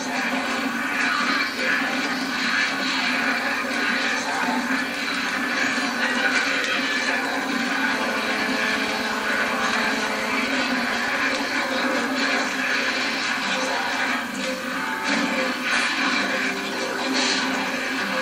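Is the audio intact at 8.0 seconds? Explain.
No. At 8.0 seconds the audio carries GSM phone buzz, running from 7.94 to 10.44 s. A nearby 2G phone pulses about 217 times a second, and the audio circuit rectifies those bursts. The result is a hard, raspy buzz rich in harmonics, about 8 dB below the signal. It is nearly steady, which points to a phone on a call.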